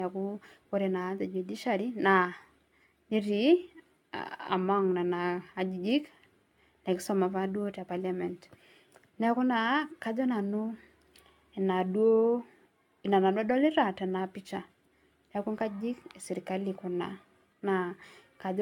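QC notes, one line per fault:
Throughout: generation loss. The speech sounds swirly, hollow and smeared, with soft, blurred consonant attacks, more damage than a single 96 kbit/s AAC-LC pass would leave. It's likely been re-encoded around seven times, each pass adding fresh quantisation noise and spectral holes.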